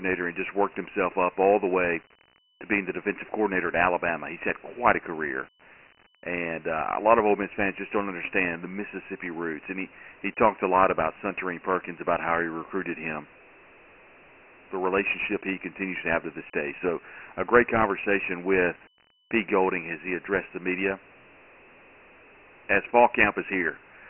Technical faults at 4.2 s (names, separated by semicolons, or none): Dialogic VOX ADPCM